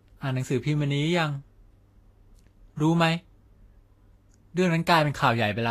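From start to finish the speech sounds hissy and grainy, with nothing above about 14.2 kHz. The likely cause is Vorbis compression at a low setting, around 31 kbps, where the treble gets quantised so coarsely that fine detail turns into noise of similar energy.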